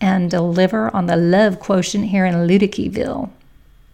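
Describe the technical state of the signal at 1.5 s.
At 1.5 s the speech signal is intact, with no audible fault at that moment.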